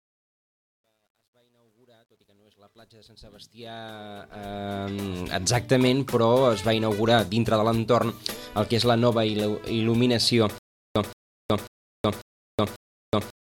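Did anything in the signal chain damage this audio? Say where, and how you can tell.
Yes, two places. The fade-in over the first 5.44 s was made in a digital gain stage that kept too few bits and added no dither, which points to roughly an 11-bit word in the sample-format conversion. From 0 to 3.35 s, where the level is lowest, the waveform collapses into coarse square steps. That gives the gritty texture. This is truncation distortion on a fade.

From 10.58 s to the end there's a stutter with silent gaps. A 0.17 s burst repeats five times at a steady 0.54 s period, with about 0.37 s of digital silence between repeats. The player keeps replaying the last fragment it had and then runs dry, so whatever should have played in that stretch never arrives. The likely cause is a playback or stream stall, with a retry after each empty buffer.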